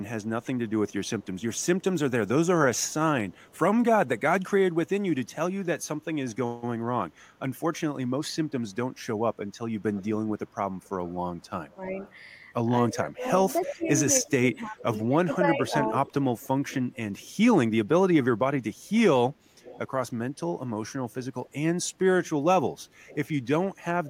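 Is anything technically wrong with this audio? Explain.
Yes, there are two problems, both pointing to echo control on a speakerphone link.

Echo leak appears at 0.23–1.66 s, 2.79–3.58 s, 9.93–12.12 s, 13.61–17.3 s and 19.62–23.28 s. A second copy of the speech trails the original by about 0.3 s. It is very faint early on, roughly 40 dB down. It rises to around 30 dB down near 10 s, is strongest between 13.6 and 17.3 s at about 15 dB below the speech, and is about 25 dB down in the last stretch. The likely cause is a loudspeaker's output reaching a microphone and the canceller failing to subtract all of it. Unlike room reverberation, which is a smooth diffuse tail, this is a distinct, repeated copy at a fixed delay.

Speech suppressed in double talk occurs between 12.9 and 15.91 s, overlapping the strongest echo. While both sides are active, the near talker's level dips in pieces by up to about 15 dB, about a second and a half in total. 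The canceller, unable to separate that talker from the returning echo, turns both down. This differs from a network dropout because the dips follow the overlapping talk rather than cutting out at random.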